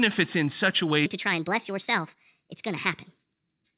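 From 1.06 s onward, likely playback on the wrong clock leaves a section at the wrong speed, 1.4 times fast, so speech hurries and rises about five semitones.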